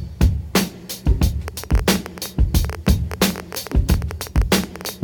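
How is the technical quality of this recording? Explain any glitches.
The technical quality is marred by a train of clicks running from 1.48 to 4.90 s: around 40 near-identical clicks at about 11.4 per second, spaced unevenly, peaking roughly 10 dB above the sound. A repeating pulse, likely from nearby interference or a faulty connection, produces ticking that persists through pauses. Unlike random crackle, the clicks have much the same shape.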